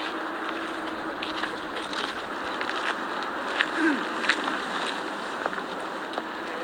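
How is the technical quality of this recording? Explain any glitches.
One glitch affects the recording. A call bitrate drop runs from 0.59 to 2.39 s. The encoder was starved of bits for about 1.7 s, which fits a fall from roughly 128 to 16 kbps. Coarser coding and lost high frequencies make the sound muffled and watery until quality recovers.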